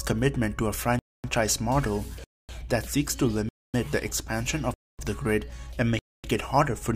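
A gap between chunks recurs at 0.99–1.24 s, 2.24–2.49 s, 3.49–3.74 s, 4.74–4.99 s and 5.99–6.24 s. Each 250 ms hard-edged silence is inserted after every 1-second chunk, so the sound stops and resumes abruptly without losing material.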